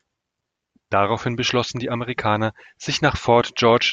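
Nothing goes wrong anywhere in this short bit of speech, so there's no technical fault to point to.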